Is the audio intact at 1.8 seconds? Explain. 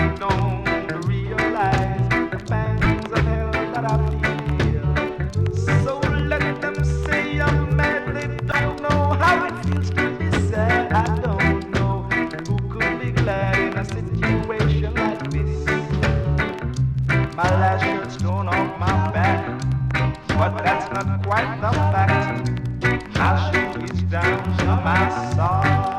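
Yes, the audio at 1.8 seconds is intact, with no dropout, click, distortion or other fault audible at that point.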